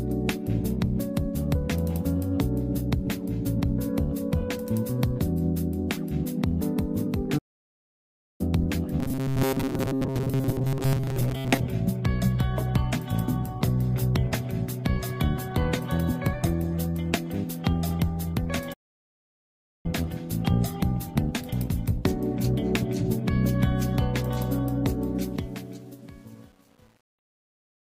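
Playback stall, 7.38 to 8.41 s: the sound stops dead in mid-flow for about 1.0 s and then carries on. The output simply has nothing to play for that second. The likely cause is the player running dry of data or its playback thread being blocked. Output stays silent until the buffer refills.

Robotic sound from repeated short buffers, 9.0 to 11.6 s: the audio turns into a rigid, metallic buzz pitched at 133 Hz that still tracks the rough shape of the material. Fresh audio is likely arriving too rarely. The software plugs the gaps by looping a fragment of about 7.5 ms, so most of the real signal in this stretch is skipped. The fixed loop length imposes that steady pitch.

Playback stall, 18.73 to 19.86 s: a second dropout of the same kind, about 1.1 s of silence cutting into the sound before it resumes. Again the likely cause is the player being starved of data or held up, leaving the output empty until it recovers.

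Truncation distortion on a fade, 25.15 to 27.9 s: the closing fade-out runs smoothly in level from roughly 25 s to the end. Its quiet tail, though, turns gritty and grainy, worst from 25.55 s onward. The fade is computed with too few bits and no dither, which fits a stage holding only about 9 bits. As the level drops toward the smallest step, the waveform collapses into coarse square steps.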